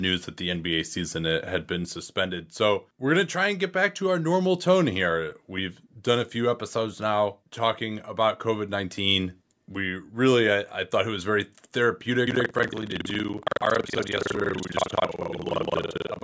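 From 12.26 s to the end, there's buffer tearing: writer and reader have slipped, so most of each buffer replays audio about a fifth of a second old, hard-joined both sides. You get a robotic rattle around 21.5 Hz, which fits a 2048-sample buffer.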